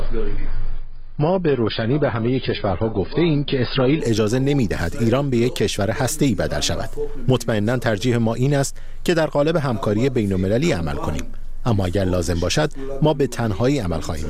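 The player began on a low-bitrate rendition of an adaptive stream, consistent with roughly 16 kbit/s AAC, before stepping up to one nearer 96 kbit/s. From 0.0 to 4.0 s the sound is dull, with nothing above 5 kHz, then quality jumps abruptly without any gap.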